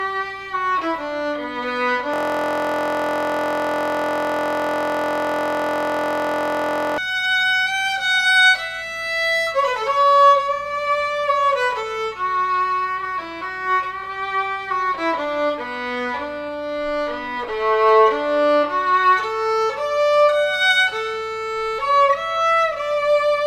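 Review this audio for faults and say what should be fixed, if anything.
A system hang loop runs from 2.14 to 6.98 s. The machine or its audio driver stalled while the sound hardware kept replaying the same ring buffer. One 23.22 ms slice repeats exactly, hundreds of times. Because the slice is so short, it sounds like a steady buzz at 43.1 Hz, not a stutter. That length fits a 1024-sample buffer. To prevent it, make sure the driver or audio thread cannot block, and that the output is muted when buffers stop being refilled.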